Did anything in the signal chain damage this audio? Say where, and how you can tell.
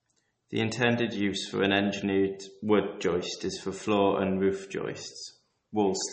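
Yes. The damage sits at the codec stage and is plainly audible throughout the speech: there is no content at all above 8.4 kHz, a hard ceiling rather than a natural roll-off, and the sound has a watery, swirling quality with smeared consonant onsets. That pattern is likely MP3 compression, at a rate that fits roughly 32 kbps. Short of bits, the encoder discards the treble outright and zeroes weaker frequency lines, which then flicker on and off between frames.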